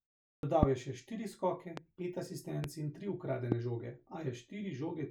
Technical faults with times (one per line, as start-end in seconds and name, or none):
0.34-0.43 clipped start after a pause
0.63-0.65 loud pop
1.77-1.80 loud pop
2.64-2.66 loud pop
3.52-3.54 loud pop